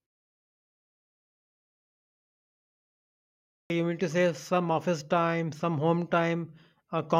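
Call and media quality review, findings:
Clipped start after a pause, 3.47–3.70 s: speech bursts in abruptly out of silence at "you mean to say", with the first 230 ms swallowed. Probable component is the output device, asleep through 3.5 s of silence and slow to wake and relock.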